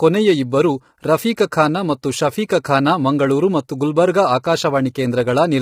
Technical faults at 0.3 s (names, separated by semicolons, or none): low-delay AAC compression